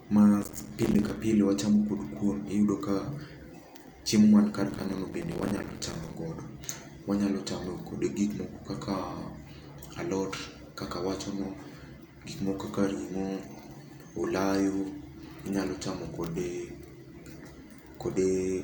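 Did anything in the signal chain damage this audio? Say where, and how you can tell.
Yes. A gritty, tearing crackle rides over the speech from 0.42 to 1.17 s and again from 4.71 to 6.14 s, then stops abruptly. This is processor overload crackle at the driver/buffer stage: dozens of roughly 5 ms buffers missed their deadlines, each dropping out as a hard-edged silent gap.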